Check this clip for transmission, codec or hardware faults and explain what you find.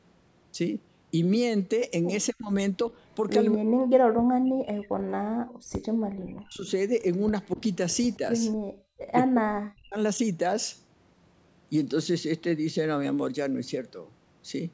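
The speech shows three echo-canceller faults, all inside the call's microphone processing, which limits the band to 8 kHz.

Speech suppressed in double talk occurs at 2.33–2.51 s, 3.54–5.19 s, 6.1–8.22 s and 9.28–9.97 s. The talker dips sharply, by up to roughly 40 dB, in patches from a fifth of a second to about a second and a half. The likely cause is the canceller treating overlapping far-end speech as echo and attenuating everything.

An echo leak appears at 3.0–3.15 s and again at 6.67–9.11 s. A copy of the voice trails by 246 ms. It is very faint in the first instance and more audible in the second, about 25 dB down. This is likely loudspeaker pickup that the canceller failed to subtract fully and sent back.

Background gated by the echo canceller affects 5.43–5.71 s and 8.57–9.01 s. The room noise drops by about 40 dB for a fraction of a second, then returns. The canceller clamped the microphone while the loudspeaker played and released it afterwards.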